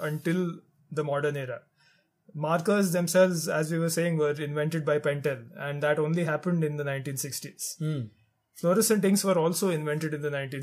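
No technical faults can be heard in this audio.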